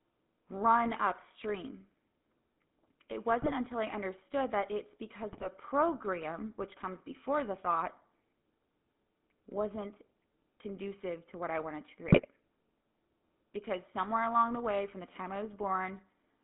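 Speech run through the GSM full-rate codec the whole way, band-limited to roughly 200 Hz to 3.5 kHz with that gravelly, buzzy roughness you'd expect from 13 kbps coding. There are also GSM bit-error bursts at 3.42–3.52 s (just before "until I understood that"), 5.32–5.49 s (between "I understood that it's" and "program which comes before") and 12.08–12.26 s (after "what I wanted to"), where corrupted frames turn into squawks and gargling.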